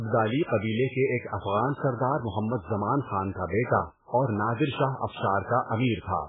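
From start to finish the speech sounds watery and swirly, with a flickering, metallic chirp on the sibilants and softened, smeared consonant onsets. Nothing is heard above about 3.8 kHz, so the top is dull and muffled. The likely cause is heavy MP3 compression at a very low bitrate, in the region of 8 kbps. Starved of bits, the encoder cut the treble at a fixed point and dropped weak frequency lines that switch on and off between frames, producing the swirl.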